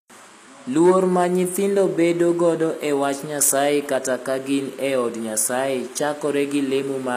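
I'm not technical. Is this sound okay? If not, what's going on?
No. The speech was most likely squeezed through HE-AAC compression, which keeps the lower sounds and rebuilds the treble from copies. Throughout the clip the s sounds turn gritty and metallic, and nothing reaches above about 15 kHz.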